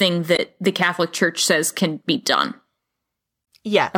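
Speech, hit twice by damaged data in a compressed stream: corrupted bytes make the decoder misread frames and lose sync until it finds the next header. The result is a brief glitch from 0.35 to 0.39 s and again from 3.41 to 3.44 s.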